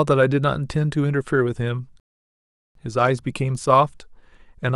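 A rebuffering stall runs from 2.00 s to 2.75 s. The player used up the speech it had already downloaded and had to wait for more data before it could continue. The sound drops abruptly into silence for about 754 ms, then picks up at exactly the point where it stopped, with nothing skipped or repeated. The pause adds three-quarters of a second to the running time and breaks the flow of the speech.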